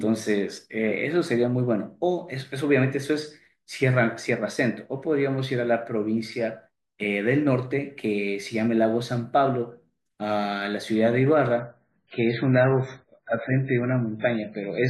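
At 11.60 s the adaptive stream drops to a lower bitrate until the end. The speech turns dull and swirly without any gap. A spectrogram shows everything above 7.5 kHz cut off abruptly, consistent with a fall from 128 to 16 kbit/s MP3.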